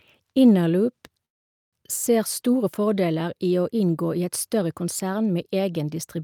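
Speech that stops dead from 1.25 to 1.75 s, a near-silent gap before resuming intact: a call audio freeze, likely from delayed packets draining the jitter buffer.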